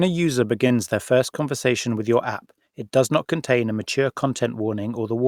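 Speech with one short stall from a late packet, at 0.67 to 0.73 s, just after "a user". A packet arrived late and the jitter buffer ran dry. The sound is held for about 24 ms with a slight buzz or dip. Nothing is lost. Everything after plays 24 ms later.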